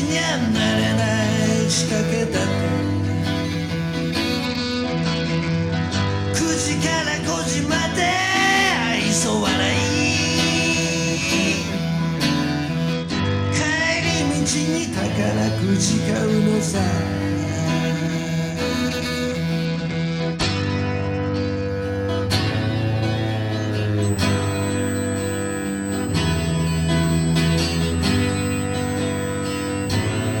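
At 4.45–6.35 s, 12.93–14.05 s and 19.65–21.68 s a Bluetooth SBC bit pool drop dulls the treble and adds gritty noise. It fits the bit pool falling from 31 to 11, around 83 kbps. A spectrogram shows the upper bands going blank. From 24.02 s to the end, USB whine from bus-frame current leaks in as a steady 8 kHz tone, roughly 15 dB below the signal, drawn as a flat horizontal line.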